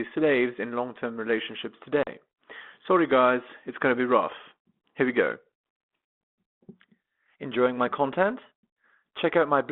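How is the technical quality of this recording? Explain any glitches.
One glitch stands out: a packet loss on an ADPCM call at 2.03 to 2.08 s, heard through a narrow telephone band of about 200 Hz to 3.5 kHz carrying the light grain of 32 kbit/s G.726.

About 40 ms of audio, a few packets' worth, went missing and was filled with silence, leaving a hard-edged hole. Afterwards the decoder's adaptive predictor and step size no longer matched the sender's. The speech therefore returns with brief distortion, settling within some tens of milliseconds.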